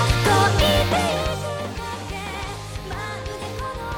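No technical faults are audible.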